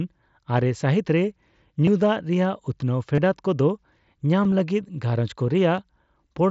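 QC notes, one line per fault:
1.86, 3.15–3.18, 4.44–4.52 and 5.77 s, concealed Bluetooth headset packet loss: headset packets dropped, and the phone patched each gap by repeating recent waveform. The single loss at 5.77 s barely shows. The roughly 15 ms run at 1.86 s and 30 ms run at 3.15 s give a brief buzzy hold and a slight warble. Around 4.5 s, small losses scattered over about 75 ms are nearly hidden in the mSBC wideband sound.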